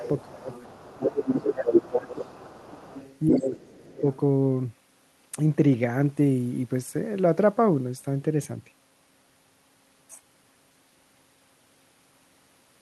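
From 0.0 to 0.22 s the other side's voice leaks through at about 15 dB below the talker, while the talker's speech dips by about 5 dB in the first 0.04 s. Speech suppressed in double talk recurs at 0.25–0.49 s (about 20 dB), 0.94–2.26 s (about 15 dB) and 3.29–4.04 s (about 25 dB). The echo canceller likely turned down the talker's speech along with the echo, so the talker's voice sinks or breaks up. Leakage returns at 0.5–1.75 s (about 5 dB below), 1.94–3.42 s (about 10 dB) and 3.84–4.17 s (about 20 dB). Here the likely cause is residual loudspeaker echo the canceller missed, so a second voice is heard beneath the talker.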